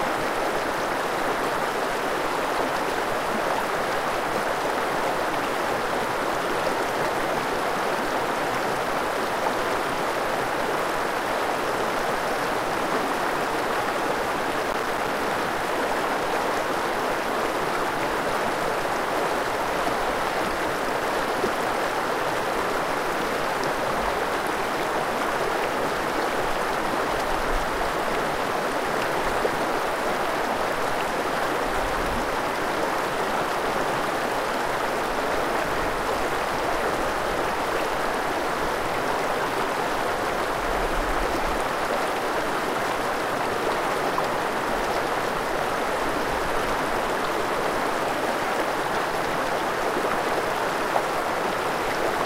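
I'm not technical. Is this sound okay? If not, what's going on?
No, there is one problem. From about 14.63 to 15.08 seconds, a little under half a second, you hear a burst of crackle. This is processor overload crackle. The computer playing or recording the sound got too busy. It handles audio in tiny chunks, a few milliseconds each. Here it missed over a dozen of them in quick succession. Each missed chunk became a short gap of silence with sharp edges. Together those gaps make the gritty crackling, which stops once the computer catches up.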